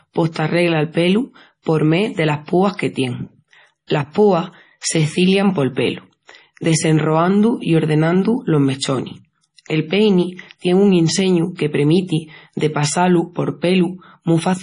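Throughout the speech, the sound has a watery, swirling quality, with metallic chirps on s sounds and smeared consonant attacks, and nothing at all above 10.5 kHz. This points to MP3 compression, likely at a very low bitrate, around 32 kbps. Starved of bits, the encoder has cut the treble at a fixed frequency and dropped weak frequency lines that flicker in and out between frames, leaving heavy codec damage across the clip.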